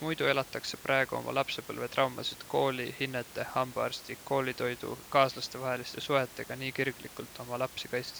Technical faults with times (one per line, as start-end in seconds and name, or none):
none